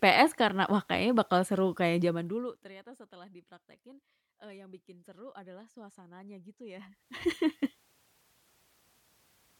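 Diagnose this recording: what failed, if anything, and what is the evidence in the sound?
A rapid ticking rides on the speech from 2.04 to 2.77 s, after "kayaknya bakal seru kayak" and before "setelah dipraktekin eee yang", while the level drops by about 25 dB. That is zipper noise: the gain stage applies the fade in unsmoothed steps, roughly 70 per second, and each jump clicks.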